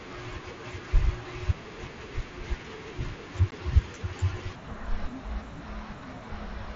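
At 3.51 s, unconcealed Bluetooth headset packet loss cuts a 15 ms hole in the speech, which fits two lost packets, with abrupt edges. The waveform shows a flat gap, and the spectrogram a thin vertical blank.

From 4.55 s to the end, a section at the wrong speed plays at 0.59 times normal, likely from a clock mismatch. Pitch drops about ten semitones, so the speech sounds deep and slow, with harmonics squeezed downward on the spectrogram.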